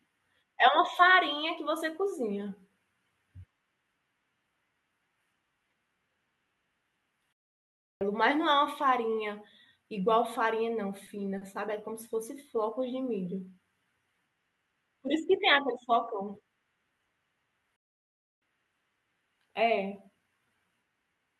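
The player likely ran short of data or had its thread blocked, causing a playback stall at 7.33 s lasting 0.68 s and another at 17.76 s lasting 0.66 s. Each time, the speech cuts off mid-flow into silence before it resumes.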